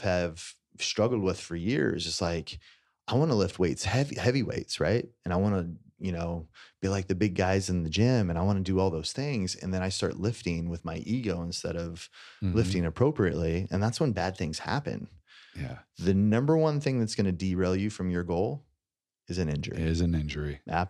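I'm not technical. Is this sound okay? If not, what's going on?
Yes, this recording sounds fine, with nothing going wrong that a listener would notice. There is nothing here that needs fixing.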